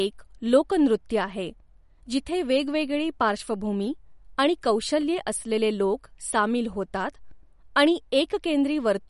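A speech recording that was likely squeezed through an MP3 encoder starved of bits, with damage consistent with a low bitrate around 48 kbps. Running short, the encoder has sliced away the treble, leaving nothing above 11.2 kHz for the whole clip, and has dropped the quieter frequency lines, which flicker in and out between frames. The MP3 compression is plainly audible throughout as a watery, swirling texture with dulled, smeared consonant attacks.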